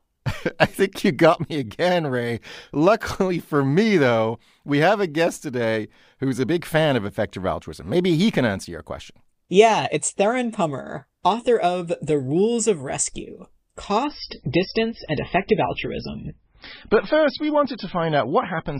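At 14.04 s the adaptive stream suddenly drops to a lower bitrate with no gap. Everything above 5.6 kHz disappears and artefacts suggest very low-bitrate MP3.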